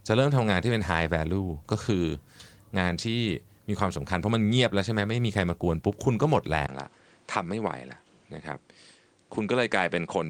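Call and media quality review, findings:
6.67 s to end: 20 ms waveform gap, level down about 5 dB, spectrogram empty above 9.4 kHz. Likely input switched to a poorer device.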